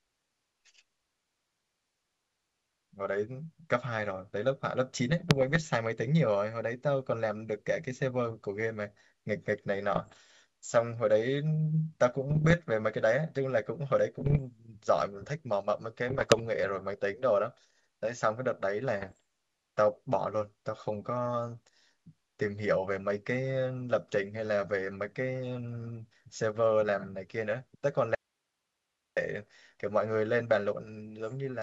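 Bit errors on an ADPCM link corrupt the stream at 5.1 to 5.7 s, 9.95 to 10.21 s, 12.30 to 12.54 s, 14.20 to 14.41 s, 16.08 to 16.41 s and 18.98 to 19.17 s. The error rate is well under 1 percent in the first burst, about 0.7 percent in the second and around 1 percent in the later ones. Each flipped bit knocks the decoder's step size and predictor off course, so the G.722 speech breaks into pops and rough, briefly louder or quieter bursts. From 28.15 to 29.17 s comes an audio dropout to a faint residue, likely the signal source failing while the path stayed live. The speech cuts abruptly to hiss about 55 dB down for roughly a second, then returns mid-flow.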